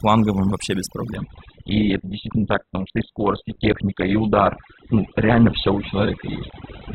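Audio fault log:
throughout: overdone noise removal. A noise reduction stage was set far too aggressively, so any frequency band sitting close to its noise estimate is pulled right down or switched off, and quiet parts of the speech go with it. The background becomes near silence flecked with twinkling specks.
1.16 to 6.94 s: adaptive stream at a lower bitrate. At 1.16 s the stream switches abruptly to a much leaner encoding and stays there to the end, with no gap at the changeover. The sound fits a drop from Opus at 64 kbit/s to about 8 kbit/s. Nothing remains above 4.2 kHz, so the speech loses its treble and sounds dull. Codec artefacts become more prominent.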